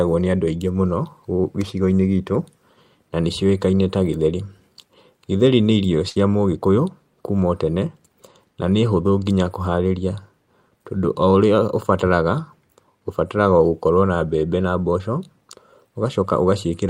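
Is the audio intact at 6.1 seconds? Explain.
No. A burst of packet loss from 6.09 to 6.17 s fills 60 ms by stretching and fading the preceding sound, then skips 60 ms. It shows as flat, decaying spectrogram bands ending in an abrupt waveform jump.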